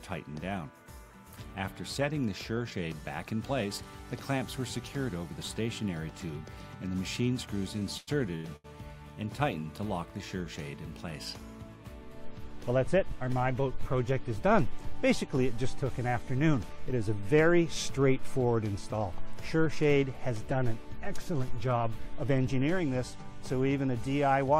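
Repeated stalls (stutter) between 7.79 and 8.66 s: late packets emptied the jitter buffer four times, and concealment stretched the last sound for 287 ms (longest 101 ms), so the audio drags without losing anything. A jitter buffer speed-up between 12.69 and 13.17 s trims around 70 ms of pitch periods to shed excess buffered delay, so the audio runs at 113% speed at unchanged pitch and sounds hurried.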